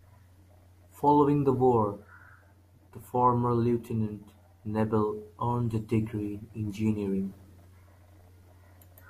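No technical faults can be heard anywhere in the speech. There is nothing here that calls for a time or a description of a problem.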